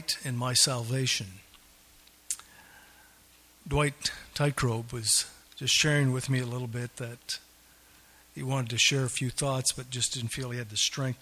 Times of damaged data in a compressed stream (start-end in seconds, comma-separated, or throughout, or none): none